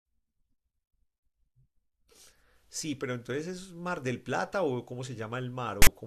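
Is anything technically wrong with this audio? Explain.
Yes. At 5.82 to 5.87 s, near the end of the speech, there is a brief burst of file tags played as audio. A block of text metadata is decoded as sample values. The result is a loud, harsh rasp with hard edges, lopsided to one side of the waveform.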